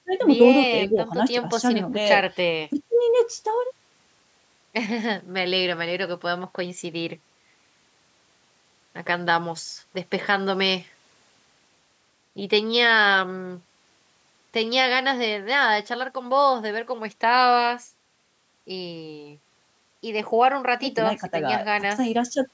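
No technical faults are audible.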